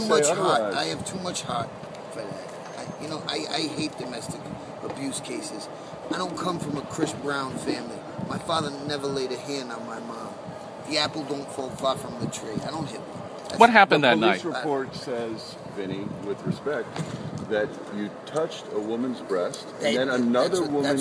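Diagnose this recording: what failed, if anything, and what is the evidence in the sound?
Nothing in the recording points to a failure at any stage of the chain. No event or disturbance stands out anywhere in the audio that would need a diagnosis.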